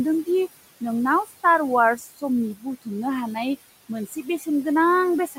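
Throughout the clip there are noise suppressor artifacts. The room noise, about 17 dB below the speech, is pushed down by about 18 dB between phrases and comes back under them. On a spectrogram the noise floor appears as shifting, patchy speckles rather than an even haze.

Speech cut by the noise suppressor occurs at 1.25–1.44 s, just after "दि नोंनाव", then at 1.97–2.23 s, 4.07–4.47 s, and from 5.27 s to the end. Each time the suppressor mistakes parts of the speech for noise and lowers them by about 10 to 15 dB, so those sounds come across faint or swallowed. The waveform shows short dips in the envelope, and the spectrogram shows those stretches of speech energy faded toward the noise floor.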